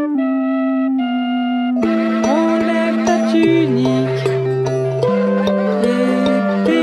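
No technical faults can be heard anywhere in this music clip. Nothing in the sound points to trouble in the recording, processing or playback chain.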